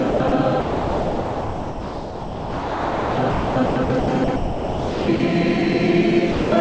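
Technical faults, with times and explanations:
0.10–0.32 s and 0.60–5.20 s, sound chopped by the voice detector: in both stretches the audio keeps breaking off and resuming. About 140 ms is replaced by comfort noise in the first stretch and 3.88 s in the second. The likely cause is the sender's voice detector switching transmission on and off repeatedly. That many-times switching, rather than one single cut, is what marks it as chopping.
6.32–6.52 s, sound dropped by the voice detector: a single 200 ms gap where the sound gives way to steady, even noise and then returns. The detector most likely took this quieter passage for background and stopped sending, and the receiver filled the hole with comfort noise. Unlike the earlier chopping, this is one clean dropout with no on-off flicker. The filler, like the G.722 call audio around it, carries nothing above 8 kHz.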